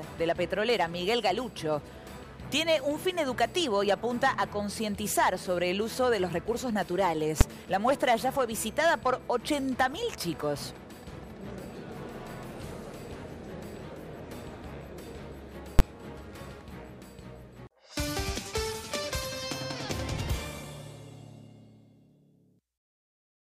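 The audio has two sharp bangs from invalid numbers at full scale, at 7.41 s and 15.79 s. Infinite or invalid values were pinned to maximum level for about 5.8 ms and 11.6 ms, which fits blocks of 256 and 512 samples. Each is a single flat, saturated slab rather than a quiet dropout or a small click.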